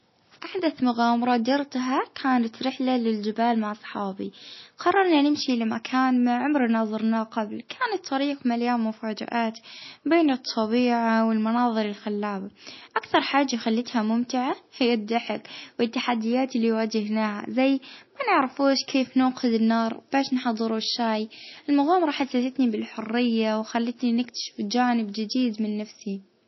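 An MP3 encoder starved of bits is the likely cause throughout, consistent with a bitrate around 24 kbps. It cuts everything above 5.8 kHz, dulling the speech, and drops weak frequency lines frame to frame, leaving a plainly audible watery swirl and smeared consonants.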